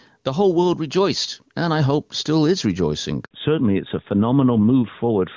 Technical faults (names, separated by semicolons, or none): gain pumping; handover gap; fallback to narrowband